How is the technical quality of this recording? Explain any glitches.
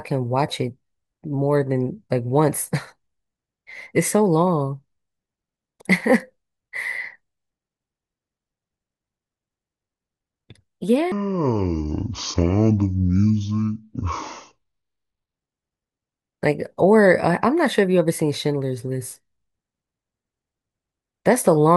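The recording has one clear glitch: a stretch of the speech plays at the wrong speed.

From 11.12 to 15.36 s, that section at the wrong speed runs at about 0.56 times normal rate, likely because it was played or edited against a mismatched clock. Pitch and tempo drop together, roughly ten semitones, so the speech turns deep, sluggish and drawn out. On a spectrogram the harmonic stack and formant bands shift sharply downward and spread out in time. On the waveform, syllable envelopes look visibly stretched, with wider cycles between peaks.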